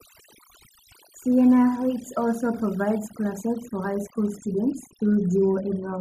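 Overdone noise removal runs throughout: the reduction is set too strongly, so frequency bands near the noise floor collapse, leaving twinkling, near-silent gaps.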